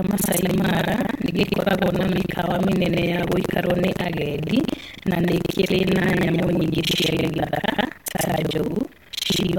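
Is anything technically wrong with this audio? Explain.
Yes. Buffer tearing runs throughout. Writer and reader cross each period, so about two fifths of each buffer is stale. The result is a robotic 23.4 Hz buzz, fitting a 2048-sample buffer.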